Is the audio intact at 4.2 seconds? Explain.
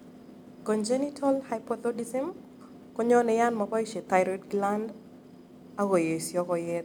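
Yes, the audio is intact at 4.2 seconds, with no audible fault at that moment.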